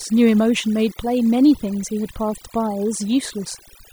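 Overdone noise removal runs from start to finish. A noise reduction stage was pushed too hard on a noisy speech recording, so any frequency band sitting near its noise estimate is pulled far down or shut off entirely, taking the quieter parts of the voice with it. The pauses fall to near silence scattered with twinkling, chirpy specks, and the voice has its softer detail stripped away.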